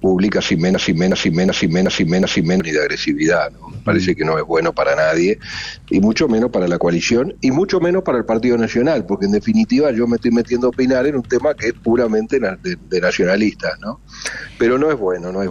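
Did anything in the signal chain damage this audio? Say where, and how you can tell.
Yes, at the driver or buffer stage: a system hang loop from 0.74 to 2.60 s, where one 0.37 s piece repeats five times at 2.69 Hz, an exact repeat that fits a 16384-sample ring buffer. About two seconds of audio are lost. The waveform shows identical blocks, and the spectrogram shows copied columns.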